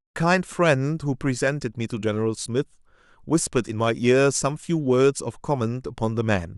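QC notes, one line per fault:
Nothing to flag here; the speech just eases in with a smooth fade over the first 0.17 s or so, which is a normal editing touch rather than a problem.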